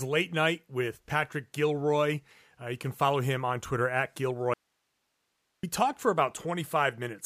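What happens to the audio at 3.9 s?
Nothing goes wrong at 3.9 s; the speech carries on intact through that moment with no audible fault.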